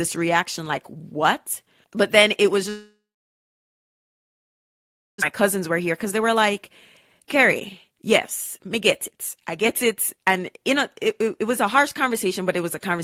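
Right after "but then it was", from 2.69 to 5.24 s, the stream stops, likely from a long network dropout. The last sound is stretched into a buzz that fades, then about 2.2 s of silence follows, a flat waveform and blank spectrogram. When the audio resumes, about 1.6 s of speech is gone.

A jitter buffer speed-up follows as the receiver sheds the delay of nearly a second that built up. Short pitch-period chunks are cut out from 5.40 to 6.70 s (105% speed), 7.19 to 7.45 s (125%), 7.87 to 8.10 s (157%) and 8.58 to 12.99 s (111%). Together they remove close to 0.8 s. The speech sounds hurried at unchanged pitch, with the bursts around 7.2 and 7.9 s most rushed. On a spectrogram, harmonic spacing stays the same while syllables are squeezed closer together. The waveform shows small splice joins where pieces were removed.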